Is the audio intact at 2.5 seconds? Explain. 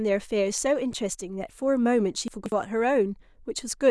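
No. Between 2.28 and 2.52 s the speech has chunks out of order: one 60 ms chunk reached the output three chunks late, so it plays after the three that should have followed it. No audio is missing, but the sequence is scrambled and the splices create three abrupt joins. At 2.5 s you are inside this jumbled stretch, which sounds like a brief garbled hiccup in the speech.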